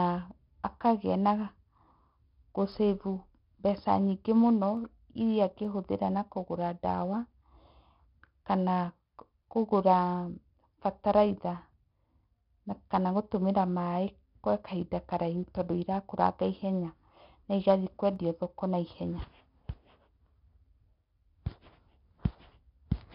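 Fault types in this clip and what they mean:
4-bit ADPCM compression: Each sample is stored as a small 4-bit step away from a predicted value, and the step size adapts as the signal changes. The damage here is heavy. A gritty hiss rides on every loud stretch of the speech and rises and falls with it. Sharp onsets sound rough where the step lags behind.
dropped samples: Four sharp single clicks are heard, at 2.72, 4.77, 5.65 and 18.16 s. The last falls between "ihenya na igathiĩ" and "thoko na". Each shows as a thin vertical line across the spectrum. The likely cause is a tiny gap in the sample stream, a fraction of a millisecond long, so the waveform jumps straight to a later value. The gap is too short to remove any sound. Only the jump is heard.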